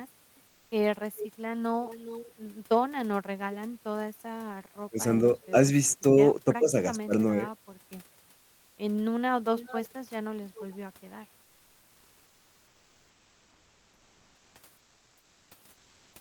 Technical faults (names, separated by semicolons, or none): comfort noise in place of the background; echo leak; speech suppressed in double talk